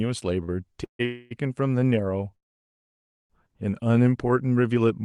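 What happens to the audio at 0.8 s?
A late packet emptied the jitter buffer, causing a short stall from 0.72 to 0.76 s: the last sound is held about 20 ms too long, with a slight buzz or dip, and nothing is lost. Just after, from 0.84 to 1.01 s, comes a call audio freeze, likely from packets held up in transit. The receiver extends the last sound as a fading buzz or hiss that drops to about 110 ms of silence, then resumes where it stopped, inserting a 150 ms gap.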